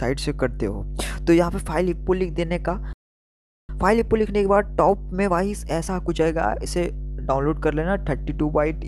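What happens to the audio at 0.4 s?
Nothing goes wrong at 0.4 s; the audio plays through that moment intact, with no dropout, click, distortion or other fault to be heard.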